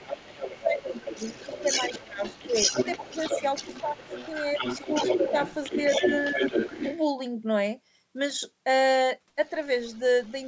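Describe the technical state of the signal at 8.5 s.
At 8.5 s the speech is intact, with only the ordinary call microphone processing audible: the lowest bass is trimmed and nothing extends above about 8 kHz.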